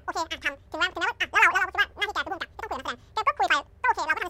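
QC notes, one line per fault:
Throughout, audio read two samples at a time (double speed): the speech races at twice normal speed, a full octave (12 semitones) high and chipmunk-like. The reader treats each pair of samples as one frame, as if stereo or double-width, halving the duration.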